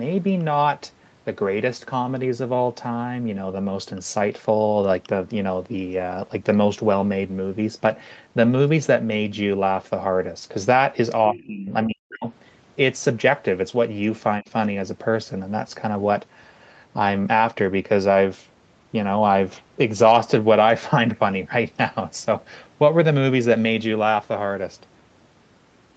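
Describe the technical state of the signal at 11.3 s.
At 11.3 s the echo canceller most likely faced double talk: both ends were speaking, it could not tell the local talker from the loudspeaker echo, and it pulled the whole microphone signal down. This speech suppressed in double talk runs from 11.32 to 11.70 s, about 300 ms in all, with the deepest dip around 25 dB. The local speech audibly sinks.

Overlapping that dip, the other side's voice leaking through appears from 11.35 to 11.44 s, likely because the same canceller failed to remove all of the far end's loudspeaker sound from the microphone pickup. The leak sits roughly 20 dB below the local speech, so it comes through as a brief, faint second voice, a scrap of sound under the suppressed talker. The Opus coding band, which stops at 8 kHz, limits both voices to the same dull top end.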